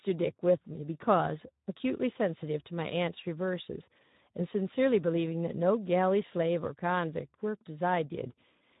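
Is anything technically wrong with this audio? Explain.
Yes. Throughout, the speech passed through the Speex codec at a low setting, consistent with about 11 kbps. Too few excitation bits leave it plainly noisy and hoarse.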